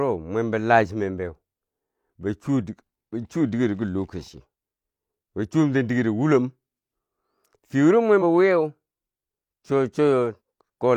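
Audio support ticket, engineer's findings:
Compressed frames skipped at 8.18–8.23 s (between "fiye wuro" and "bo wiyeu") and 10.36–10.40 s. Speech jumps ahead about 50 ms and about 100 ms: whole frames missing or rejected by the decoder.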